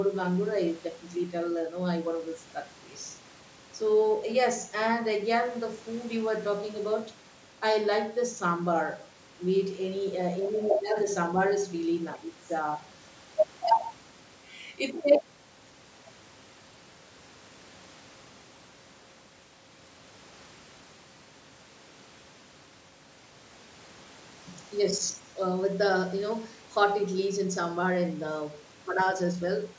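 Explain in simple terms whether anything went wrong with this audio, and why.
Nothing went wrong with this speech recording: it passed through a call's microphone processing, which trims away the deepest bass and keeps nothing above 8 kHz, and both of those are normal for a phone or video call.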